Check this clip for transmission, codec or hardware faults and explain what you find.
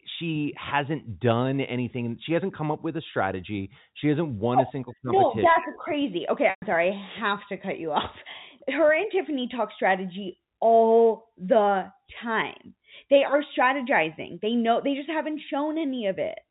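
One transmission fault is audible in this speech clip. From 6.5 to 6.62 s there is packet loss with pitch repetition. About 120 ms of audio went missing, which fits a run of six 20 ms packets. The receiver filled the gap by repeating the last pitch period and fading it out. The sound holds briefly on a buzzy tone, drops to silence, then cross-fades back into the speech. The G.711 telephone coding underneath keeps the audio band-limited below 4 kHz.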